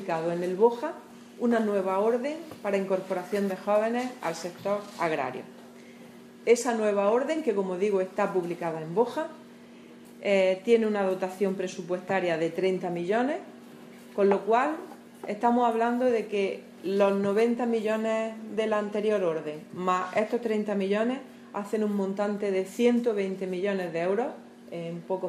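Nothing in the recording stood out as a problem on listening.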